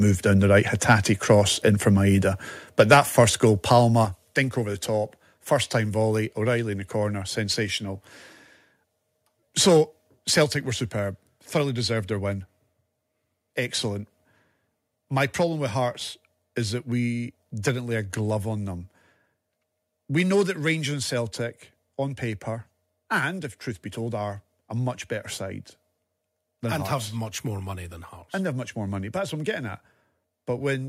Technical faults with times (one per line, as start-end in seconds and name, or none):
0.89-0.95 microphone overload
1.30-1.32 microphone overload
2.79-3.23 microphone overload
2.94 microphone volume stepped down
4.05 microphone volume stepped down
10.44 microphone volume stepped down
20.94 microphone volume stepped down